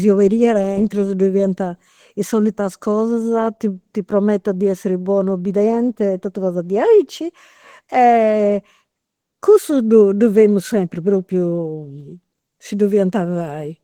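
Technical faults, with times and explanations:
Throughout, Opus compression: the speech is plainly degraded, with a muffled, hoarse and grainy quality, yet content still reaches about 20.2 kHz, so the top end is not cut away. This is likely Opus running in its hybrid mode, where a speech coder handles the lower band and energy-preserving band coding with noise filling handles the upper band. At a rate that fits about 16 kbps, the upper bands are rebuilt as shaped noise, producing the roughness.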